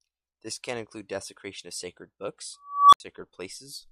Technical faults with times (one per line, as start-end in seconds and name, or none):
2.61-3.00 unstable filter